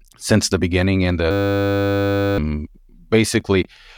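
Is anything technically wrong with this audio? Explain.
Yes. From 1.31 s to 2.38 s the speech is replaced by a system hang loop. The host or audio driver stalled while the output hardware kept replaying its ring buffer, so one 10 ms slice of sound repeats exactly, more than a hundred times. At a 100 Hz loop rate this is heard as a steady buzz rather than a stutter, which fits a buffer of about 10 ms. Roughly a second of the actual speech is lost underneath it.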